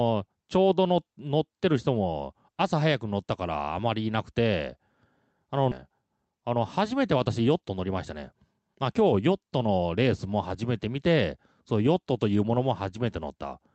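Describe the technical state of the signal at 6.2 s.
At 6.2 s the signal is inside a jitter buffer speed-up running from 5.89 s to 9.20 s. The receiver's buffer had built up more audio than its target. To drain it, the receiver cut out short slices, each one or a few pitch periods long, many times in a row. About a third of a second goes missing across the span. Speech plays roughly 10% faster at unchanged pitch and sounds hurried. The call path's band limit at 8 kHz continues through it.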